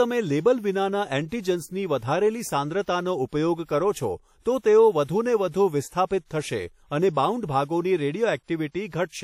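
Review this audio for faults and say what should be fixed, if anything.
A lossy transform codec, likely WMA compression at a bitrate around 48 kbps, smears quantisation noise across each long block throughout, so the speech rings, sounds washy, and stops above 16.6 kHz. Encode at a higher bitrate or keep a lossless master to prevent this.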